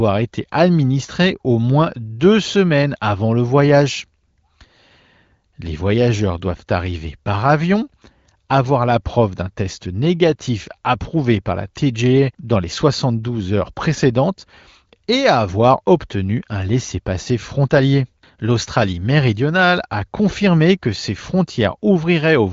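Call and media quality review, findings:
No faults found; speech passes through the AMR wideband (HD Voice) codec at a quality that fits its 18.25 kbit/s mode, band-limited with nothing above 7.5 kHz and coding effects faint at most.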